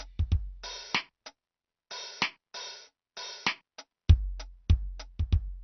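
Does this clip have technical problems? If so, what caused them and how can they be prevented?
Yes. Throughout, the music was likely squeezed through AAC compression at a low bitrate, consistent with AAC-LC near 32 kbps. The encoder sheds high-frequency detail to save bits, so nothing survives above 6 kHz and the sound is plainly dull and damaged. Encoding at a higher bitrate prevents this.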